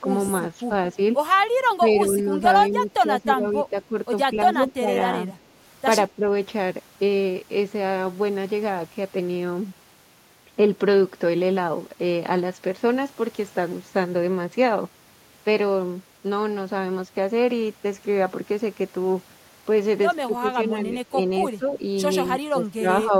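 Speech recording with two faults. From 0.26 to 0.31 s a faint delayed copy of the speech arrives about 221 ms late and around 20 dB down. That is an echo leak, likely from a far-end loudspeaker echo the canceller missed. Its fixed, distinct delay sets it apart from room reverberation. Between 1.8 and 5.3 s, at 6.09 to 6.26 s, and from 20.27 to 23.13 s, the speech dips by up to roughly 10 to 15 dB. The dips total about a second, a tenth of a second and a second. This is speech suppressed in double talk, likely an echo canceller ducking during overlapping talk. Unlike packet-loss dropouts, the speech is attenuated rather than replaced by silence.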